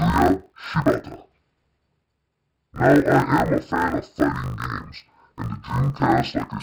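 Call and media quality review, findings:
Interleaved audio read as planar, whole clip: speech an octave low, dull and robotic, 50 Hz buzz. Each 20 ms block's halves split into left/right, playing at half speed. Check the deinterleave step.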